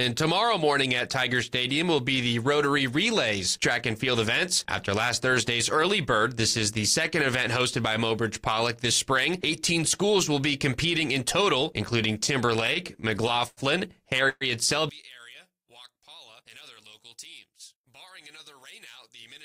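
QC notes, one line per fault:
12.13–13.60 s, repeated stalls (stutter): Packets kept arriving late, so the jitter buffer ran dry fifteen times. Each gap, the longest 92 ms, was bridged by extending the last sound. About 234 ms was filled, roughly 16% of the span, and nothing was lost, so the audio drags and stutters.
14.29–14.44 s, call audio freeze: The buffer ran empty, likely because packets were held up in transit. The last sound carries on for 119 ms, fading into about 20 ms of silence, then the audio resumes where it stopped. Everything is now shifted 119 ms later and nothing is missing.
14.89 s to the end, one channel inverted: One stereo channel has likely flipped polarity. Summed to mono, the content common to both channels cancels and the level drops by about 23 dB, leaving only a faint difference signal.
15.47–16.01 s, jitter buffer slow-down: The buffer was running low and rebuilt its reserve by repeating single pitch periods many times in a row. 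This adds 54 ms, so the passage plays at 91% speed with unchanged pitch, and sounds are drawn out.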